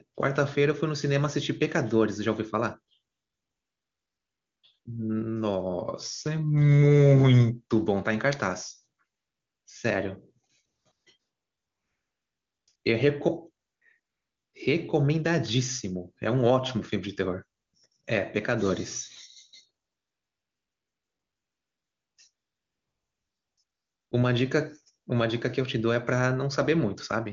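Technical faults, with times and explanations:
3.11 to 24.11 s, AMR comfort noise: fifteen gaps, from 20 ms up to about 2.3 s, the longest at 19.85 to 22.17 s. The sender judged these stretches silent and stopped sending speech frames, so the receiver filled them with synthetic noise built from a coarse level and spectrum estimate. The real background drops out and a smooth, steady hiss switches in and out. The clear speech between gaps fits a high AMR-WB rate.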